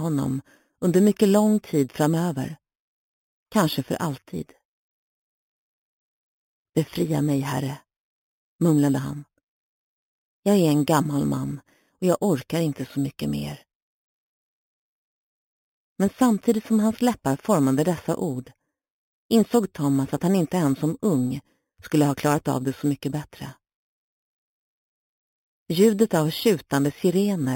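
Throughout the sound there is imaging from sample-and-hold upsampling: a metallic fizz sits between 4 and 8 kHz, about 20 dB below the signal, fitting an 8 kHz source held up to 44.1 kHz. Unlike hiss, it tracks the signal's level, and its pitch moves opposite to the sound's.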